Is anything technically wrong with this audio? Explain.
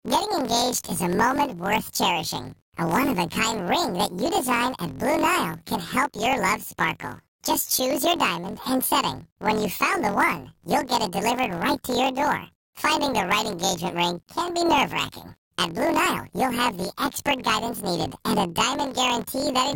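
Yes. Throughout, planar audio was read as interleaved: blocks of about 23.22 ms, which fits 1024-sample blocks, replay each channel at double speed, pushing the speech an octave high with a 43.1 Hz flutter.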